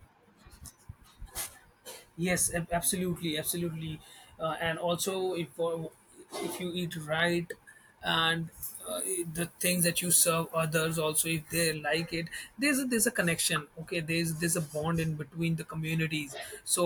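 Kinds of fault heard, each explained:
Pre-emphasis left on: from 8.63 to 11.74 s a treble boost of about 10 dB at 10 kHz, fitting FM 50 µs, is never undone, leaving speech thin and sibilant.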